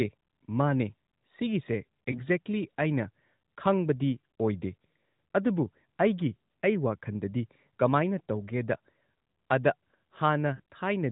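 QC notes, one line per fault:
2.12–10.60 s, lost AMR speech frames: brief dips at 2.12–2.22 s, 4.32 s and 10.56–10.60 s, the last a two-frame run. Failed frames were concealed by repeating the previous pitch and vocal-tract settings at falling gain, producing momentary warble and softening before speech recovers.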